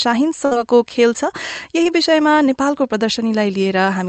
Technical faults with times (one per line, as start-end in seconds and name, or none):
0.45-0.53 burst of packet loss
1.83-1.87 short concealed packet loss